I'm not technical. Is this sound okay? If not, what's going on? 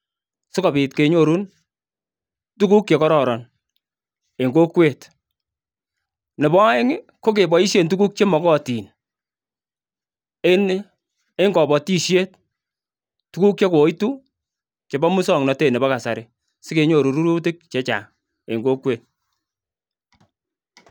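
Yes, no faults heard here.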